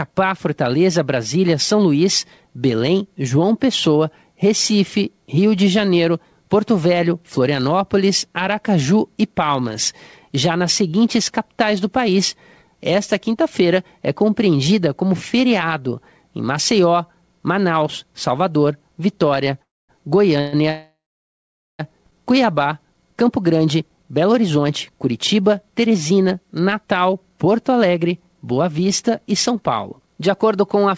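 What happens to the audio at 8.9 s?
Nothing goes wrong at 8.9 s: the speech continues intact through that moment, carried over the WebRTC call path with its G.722 coding and nothing above 8 kHz.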